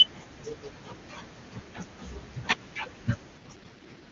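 At 3.37 s the speech turns rough and synthetic and stays that way to the end of the clip. This is an AMR rate drop. The network has told the AMR-WB codec to spend fewer bits on the voice and more on error protection. The sound fits a fall from 23.85 kbit/s, where the HD Voice speech was clear, to 6.6 kbit/s, the lowest rate. The band stays wide and there is no gap. The voice just turns raspy.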